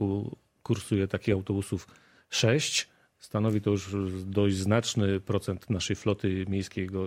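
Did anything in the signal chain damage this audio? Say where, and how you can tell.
Yes, channel delay (comb filtering) from about 5.55 to 6.55 s, at the driver or buffer stage. One channel slips roughly one sample, a few hundredths of a millisecond, before the mono sum. The first notch sits near 20 kHz, dulling the top end. A spectrogram shows the very highest band thinning only over that second.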